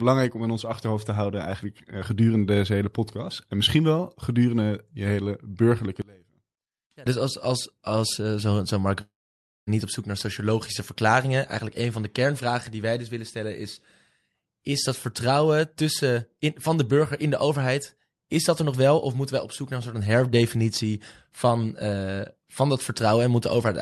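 Speech, carried over a call link whose audio stops around 12 kHz. From 6.02 to 7.06 s the voice drops by about 26 dB and turns faint, likely one channel inverted cancelling in mono. At 9.01 s the sound smears into a fading buzz, then near silence for about 0.57 s. The audio resumes at 9.70 s with a gap, likely a long network dropout.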